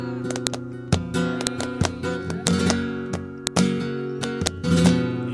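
Sharp, loud clicks strike at 0.47, 1.47, 2.47, 3.47 and 4.47 s, once per second: file header played as audio, where each joined piece's header bytes play as samples.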